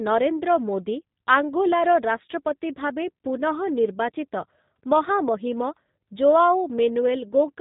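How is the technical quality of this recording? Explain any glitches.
The technical quality is limited by one fault that runs the whole way through: the speech has been squeezed through a G.729 codec, and the damage is plainly audible. Everything sounds band-limited and a bit gritty, which fits an 8 kbit/s telephony coder. The codec doesn't store the waveform. It models the throat's filtering and the pitch, then rebuilds each 10 ms frame from a handful of pulses. So nothing above 4 kHz survives, and the voice comes out rough, buzzy and slightly synthetic while staying easy to follow.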